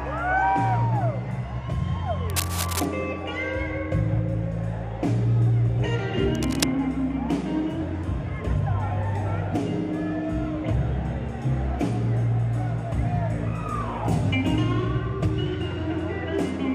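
At 2.3 s a burst of cable scratch noise begins and runs to 2.87 s. A second burst follows from 6.35 to 6.64 s. Both are dense, uneven crackles, heard as scratching or rustling laid over the sound. They sit only slightly below the sound's own level. The likely cause is a worn cable, connector or control being moved. Its contact resistance then jumps about rapidly and injects this noise.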